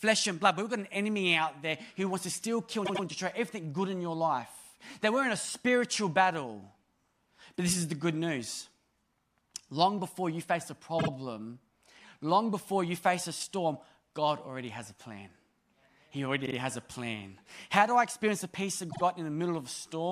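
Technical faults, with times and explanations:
2.85–3.04 s: repeated frames. A 96 ms stretch of speech stutters because that block of compressed frames was replayed twice. This adds 192 ms.
10.98–11.08 s, 16.45–16.55 s, 18.90–19.01 s: repeated frames. Shorter stutters come after "before you face a", before "has a plan" and after "experience the peace of". Each is a 48 ms block played twice more, adding 96 ms.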